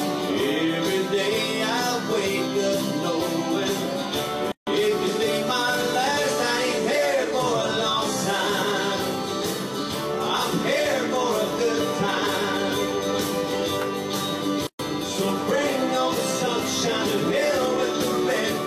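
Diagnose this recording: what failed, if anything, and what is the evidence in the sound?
The failure is at the codec stage: a gap at a join of encoded pieces. Silences open at 4.52 to 4.67 s (152 ms) and 14.67 to 14.79 s (124 ms), 10 s apart, with smeared edges. Separately encoded segments were joined without trimming their encoder delay and final-frame padding.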